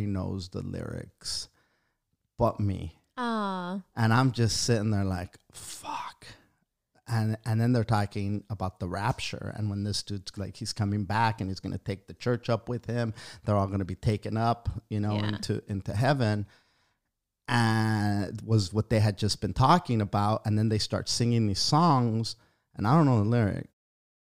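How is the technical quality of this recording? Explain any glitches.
There are no glitches in this speech recording. Near the end the level fades out smoothly, starting around 23.5 s and reaching silence at 23.74 s, as an editor's fade would.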